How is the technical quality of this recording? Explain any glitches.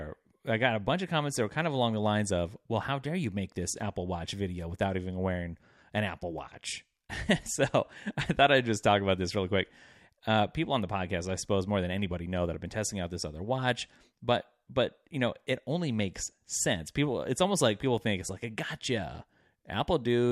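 The recording has one glitch. At 6.38 s there is a block of digital silence: about 0.2 ms of samples drop abruptly to zero and back, producing a single sharp tick.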